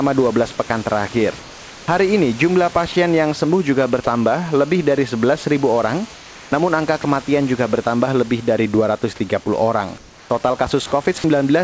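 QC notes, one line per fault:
0.68–0.70, 2.92–2.96, 7.02–7.04, 11.18–11.24 s, sound dropped by the voice detector: short gaps (the second between "ini jumlah" and "yang sembuh", the third just before "juga bertambah lebih dari") filled with steady noise, likely the detector mistaking quiet speech for background.
1.40–1.88, 6.16–6.52, 9.98–10.30 s, comfort noise in place of the background: in each pause the real room noise gives way to smoother synthetic noise about 3 dB quieter, likely because the sender stopped transmitting.
3.77–6.82 s, GSM phone buzz: from just after "yang sembuh", a hard, raspy 217 Hz buzz with plenty of harmonics, about 24 dB below the speech. A nearby 2G phone on a call pulses its radio, and the audio circuit rectifies it.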